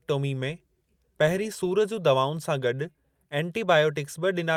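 No dropouts, distortion, noise bursts or timing errors are audible anywhere in the recording.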